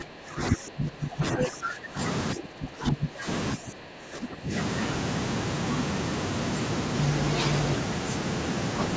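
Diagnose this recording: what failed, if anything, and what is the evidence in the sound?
The call processing stage's echo canceller likely misjudged double talk, treating the near talker as loudspeaker echo and suppressing both. The speech dips in three stretches: from 0.0 to 1.99 s, where it falls by up to about 20 dB, then 2.34 to 3.27 s and 3.55 to 4.53 s, each about 15 dB down. The level sinks and recovers as the suppressor engages. The band ends near 8 kHz, as the call path normally limits it.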